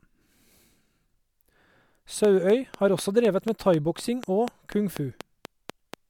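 Interference from nearby equipment or a faulty connection is likely injecting repeated pulses, producing a train of clicks from 2.25 to 5.95 s. About fifteen near-identical clicks arrive regularly, at 4.07 per second, peaking well above the speech and ticking through pauses too.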